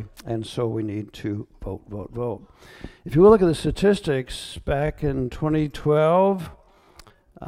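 A time-stretched section runs from 4.48 s to the end of the audio, where the pace abruptly drops to about 0.69 times normal speed while pitch holds steady, so the sound drags, likely from software repeating short pieces to lengthen it.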